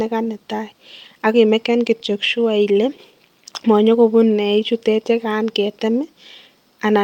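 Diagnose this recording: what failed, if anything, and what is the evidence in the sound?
Clock drift between sender and receiver, at the network jitter buffer: the sender runs roughly 4 percent fast, so the receiver's buffer keeps overfilling, producing faint hiccups throughout.

Repeated timing corrections, at the buffer: from 0.01 to 6.97 s, short pieces are cut to hold 104 percent speed, showing as small, unevenly spaced waveform splices and spectrogram discontinuities.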